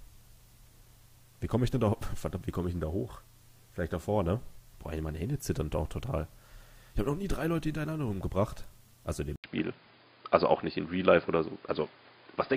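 Input switched to a poorer device, at 9.36 s and lasting to the end: after a brief gap of about 80 ms the sound turns dull and boxy, with nothing above 5 kHz. The level shifts by a few decibels and new background noise appears, sitting roughly 35 dB under the signal. This is likely a change of recording input to a narrower-band microphone or a headset's call profile, bringing its own tone, gain and noise floor.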